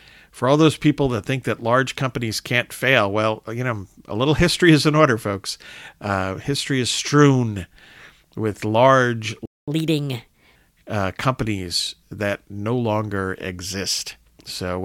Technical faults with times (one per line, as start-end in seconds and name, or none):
9.46-9.68 playback stall
9.68-10.56 catch-up at higher speed